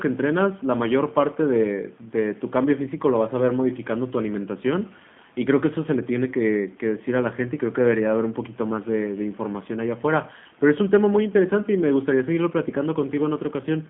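Throughout, the speech sounds rough, synthetic and confined to 150 Hz to 3.5 kHz. This is the G.729 codec, which rebuilds speech from a vocal tract model, consistent with 8 kbit/s.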